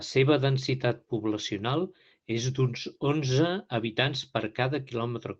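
No faults are audible in the speech; the band stops near 8 kHz and carries the coding texture of a call path, which fits Opus at about 20 kbps.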